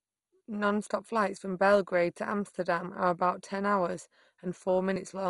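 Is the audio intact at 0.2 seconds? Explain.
No. At 0.2 seconds, as throughout the whole clip, the speech sounds dull and muffled, with a gurgling, grainy roughness and nothing above 11.2 kHz. The likely cause is heavy MP2 compression, which fits a low bitrate of about 56 kbps. MPEG Layer II divides the sound into 32 sub-bands and shares out bits among them. Starved of bits, it shuts off the upper bands and coarsely quantises those that remain, which produces the flickering, granular distortion.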